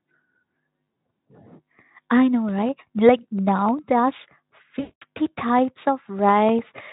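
At 4.79 s the speech breaks up until about 5.03 s. This is VoIP packet loss concealed by the speech codec. Roughly 220 ms of audio never arrived, which fits about eleven 20 ms frames. The decoder fills the hole by repeating its last pitch and spectral shape while turning the level down. The gap sounds like a smeared, buzzy tone or coloured noise fading out. Speech stays thin for a moment after it resumes. The Speex coding around the gap has at most faint damage.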